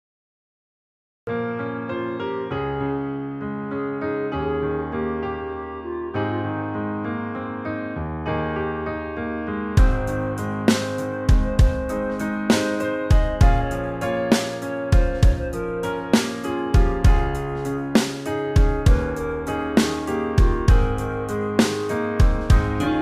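The audio opens with digital silence from 0 to 1.27 s, then enters abruptly mid-sound with no natural attack or fade-in. That is a cut-off start: capture or streaming began late, so whatever was already sounding is joined part-way through. Unlike a dropout, which interrupts sound that is already playing and then resumes, this gap sits only at the very beginning, and the first audible moment is a sound already underway.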